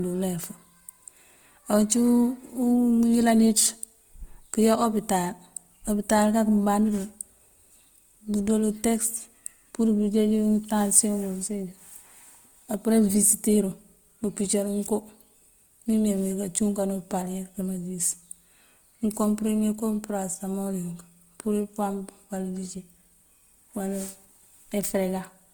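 From start to end the speech carries plainly audible Opus compression, likely from the encoder's music (CELT) mode at a rate that fits about 24 kbps. Each band keeps its energy, but where bits ran short the detail was filled with folded or noise-like content, so the speech turns rough and grainy. Unlike MP3 damage there is little swirling or watery warble, and the bandwidth stays full, reaching about 20.1 kHz rather than sounding muffled.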